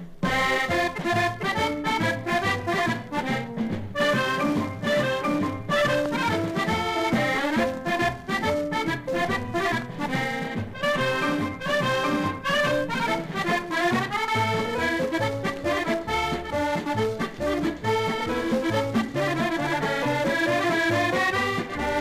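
Nothing in this recording stood out as a technical problem on listening.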